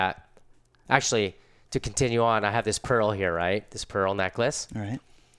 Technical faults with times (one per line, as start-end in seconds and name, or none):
none